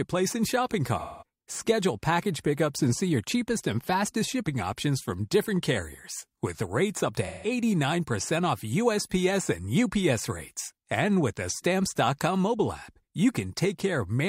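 AAC frame loss with concealment strikes twice in this speech. The decoder lost blocks of the stream and rebuilt each gap from the last good spectrum. Just after "and shopping", from 0.99 to 1.23 s, about 0.21 s goes missing, which fits a run of five frames. After "carriers with rates up", from 7.26 to 7.50 s, roughly 0.17 s is patched. Both gaps come out as a smeared, noisy, phasey smudge rather than clean sound.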